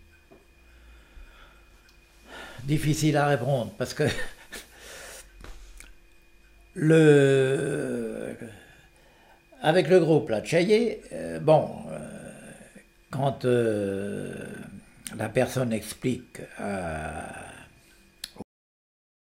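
At 18.42 s the audio has a cut-off end. The sound stops abruptly in mid-flow, with no natural decay. The final stretch of audio was never written out or played. Digital silence follows from there until the clip finishes.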